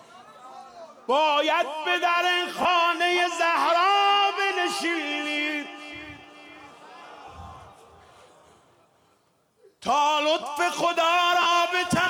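A brief noisy smear replaces the sound at 2.62 to 2.65 s, again in a tiny blip at 7.26 s, and once more at 11.42 to 11.46 s. These are lost LE Audio frames: the gaps of 30, 10 and 40 ms fit whole 10 ms Bluetooth frames going missing. The LC3 decoder covered each gap by replaying the previous spectrum with scrambled signs, so tonal content turns grainy instead of dropping to silence. The light lossy compression adds at most a faint watery texture of its own.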